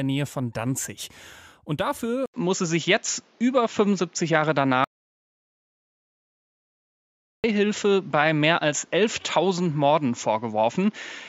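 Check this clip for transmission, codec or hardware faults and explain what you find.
Two faults stand out in this speech clip.

From 2.26 s to the end, the sound turns duller after an 80 ms silence, likely from an input switched to a poorer device. The spectrogram shows nothing above 7.3 kHz, a new noise floor roughly 35 dB down, and a level step of around 5 dB.

From 4.84 s to 7.44 s, an audio dropout to silence removes about 2.6 s. The waveform is a dead-flat line with no room tone, most likely because the input link failed.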